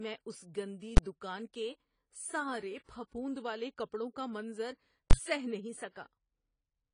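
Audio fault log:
throughout: AAC compression. The speech sounds dull and smeared, with plainly audible codec damage and nothing above 10 kHz. That cut-off and the smearing are likely from AAC-LC at a low bitrate, around 24 kbps judging by the sound. At rates that low the encoder drops the top of the spectrum and spends its few bits coarsely on what's left. That leaves gaps and a warbly, fizzy edge on sibilants and held sounds.
0.97 s and 5.11–5.13 s: invalid numbers at full scale. Twice a processing block spat out infinite or invalid values, which got pinned to the signal's extreme and held flat for the whole block, far above the speech peaks. The first hit lasts about 10.7 ms, consistent with a 512-sample block, just before "دکان کے". The second runs about 21 ms, fitting a 1024-sample block, right after "والے کپڑوں کا منظر". Both are short enough to land as a single loud bang.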